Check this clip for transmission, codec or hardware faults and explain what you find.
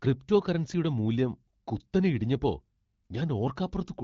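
Nothing turns up here: the speech has the sound of wideband HD Voice, which fits AMR-WB at 12.65 kbit/s, and there's no transmission, codec or hardware problem to report.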